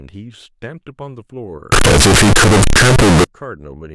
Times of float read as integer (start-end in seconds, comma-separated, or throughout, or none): 1.72-3.24